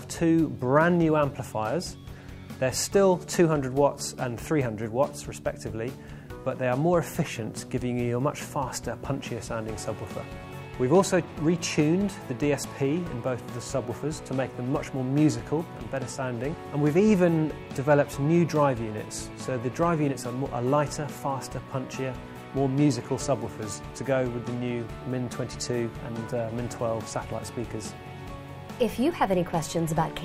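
Nothing in this audio stands out as a technical problem; it just runs along without a hitch all the way.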